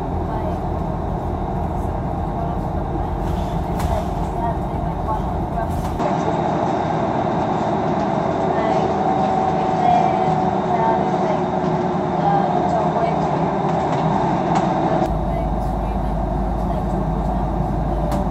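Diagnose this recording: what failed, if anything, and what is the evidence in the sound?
From 6.00 to 15.06 s the sound turns boxy. Nothing is present above 8 kHz, a new noise floor sits about 30 dB below the signal, and the level steps by about 5 dB, with no gap. The likely cause is an input switched to a poorer device at the driver stage. A spectrogram shows the top band cut off abruptly, and the waveform shows a level shift.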